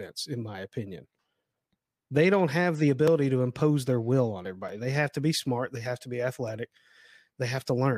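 At 3.08 s, between "don't have the" and "to impose their will", the speech drops into a block of digital silence. It lasts about 1.45 ms, which fits a 64-sample buffer left unfilled. It is heard as a tick. At 4.69 s, after "impose their will on", a 5.1 ms gap is also heard as a tick.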